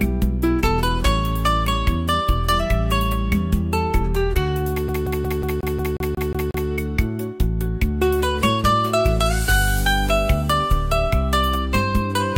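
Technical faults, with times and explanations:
4.88 to 6.69 s, CD stuck on one turn: a scratch keeps throwing the laser back one track at the same point on each rotation, so the same 0.18 s slice plays ten times over, each repeat cut by a brief mute at the jump, giving a fast, even, mechanical stutter.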